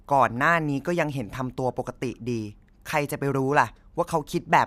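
Speech recording with no technical faults detected anywhere in the signal.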